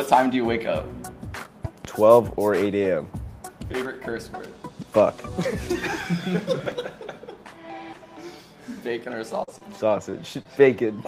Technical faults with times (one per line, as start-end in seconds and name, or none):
1.64-1.88 loud pop
6.60-6.72 chunks out of order
9.43-10.47 repeated packet loss (robotic sound)
10.87-10.89 lost packet rebuilt from error correction